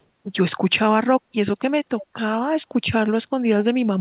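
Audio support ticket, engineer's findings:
Echo leak, 2.01–2.06 s: short, faint repeat of the speech trailing the original by 222 ms, roughly 20 dB down. Likely far-end loudspeaker pickup the echo canceller missed. Spectrogram: weak ghost of earlier formant pattern, below 4 kHz. Waveform: small low-level blip.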